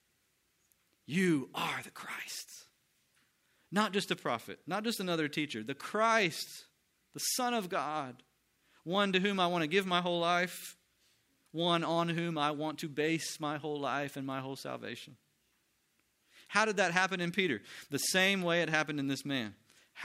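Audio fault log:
No audible faults anywhere in this speech recording.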